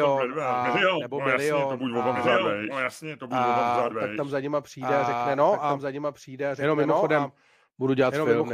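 Throughout the speech, a doubled audio track runs under the original. A second, full-band copy trails about one and a half seconds behind at roughly 5 dB lower, most likely from the same signal being captured again through a slower path. Unlike an echo or reverb, the copy arrives just once, with no decay tail and no added room colour, so it sounds like the same voice, slightly quieter, repeating everything late.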